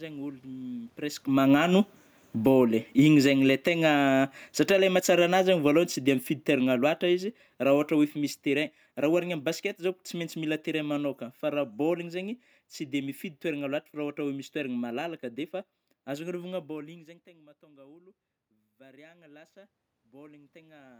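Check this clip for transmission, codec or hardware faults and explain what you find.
The problems here come from the automatic gain control, which chases the level changes when the talker moves.

Automatic gain falling, 1.22 to 12.14 s: right after the talker comes closer around 1 s, the gain control turns itself down by about 18 dB, so the speech and room noise sink together.

Automatic gain rising, 16.75 to 20.95 s: the talker backs off around 16.5 s, the input drops about 24 dB, and the control slowly adds about 6 dB, so the voice and background swell up together.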